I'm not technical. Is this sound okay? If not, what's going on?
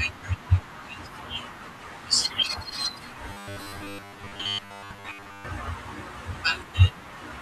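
No. From 3.30 to 5.45 seconds there is robotic sound from repeated short buffers: the speech turns into a stiff, metallic buzz that still roughly follows what is being said. This is likely because new audio arrived too slowly, so the playback kept repeating the last tiny slice, about 10 milliseconds, for most of that stretch, skipping real speech. Those quick repeats force a steady hum at 100 Hz onto the speech.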